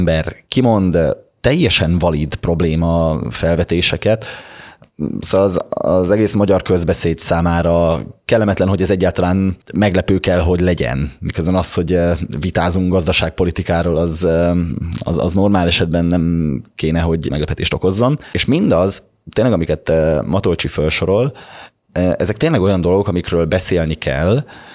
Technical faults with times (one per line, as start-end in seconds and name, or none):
none